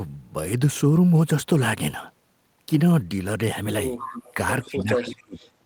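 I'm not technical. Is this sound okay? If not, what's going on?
No, there are two problems near the end of this speech clip.

From 3.97 to 4.34 seconds you can hear a quieter copy of the voice trailing about 0.18 seconds behind it. A much fainter scrap of it returns briefly from 4.65 to 4.69 seconds. This is called echo leak. The likely cause is that the other person was using a loudspeaker, and their echo canceller didn't fully filter out your voice before sending it back.

Right after that, from 4.69 to 5.39 seconds, the voice drops sharply, at its deepest almost disappearing, over about 0.7 seconds. This is called speech suppressed in double talk. It likely happened because both people spoke at once. The call's echo filter couldn't separate real speech from echo, so it turned both down.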